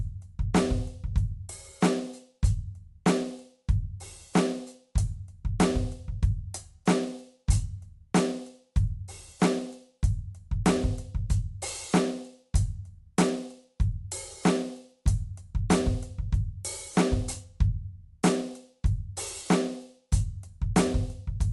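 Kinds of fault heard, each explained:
Dolby Digital compression: likely cause of the dull, band-limited music, with nothing above about 11.4 kHz and a rough, fluttering noise around sustained tones, which fits a 64 kbps AC-3 stream. A spectrogram shows a hard ceiling near 11.4 kHz and speckled noise filling the gaps between harmonics.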